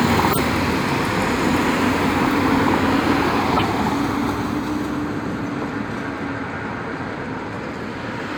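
At 0.30–0.38 s, 3.56–3.62 s and 7.54–7.57 s the everyday sound is interrupted by corrupt frame decoded bursts: flipped bits in compressed frames were decoded anyway, throwing misplaced energy across the spectrum. The first two are harsh blips peaking around -5 dBFS and span what sounds like two or three frames; the last, a single frame, is much quieter. Unlike a dropout or concealed loss, foreign noise is added instead.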